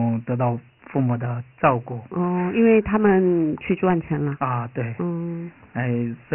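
Throughout, a gritty hiss rides on the speech and nothing is heard above 3 kHz, the mark of Dialogic VOX ADPCM, which fits 4-bit coding at 6,000 samples a second.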